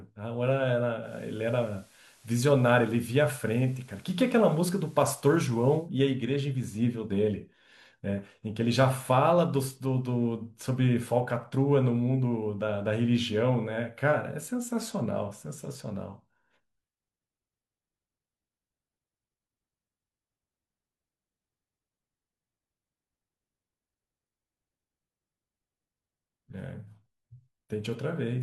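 At about 1.0 s the receiver does a digital radio blend to analogue: it loses the digital stream and cross-fades over roughly 0.15 s to the station's FM broadcast, staying there until about 5.9 s, when it fades back. For that stretch of speech you get a bed of FM hiss, roughly 30 dB under the signal. The overall level doesn't shift at either switch.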